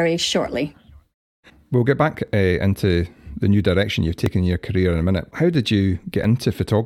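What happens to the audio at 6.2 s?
Overlap between stream segments at 6.24 s: the player trims about 17 ms it wrongly treats as duplicated at a 2-second segment boundary, so the speech jumps in a tiny skip.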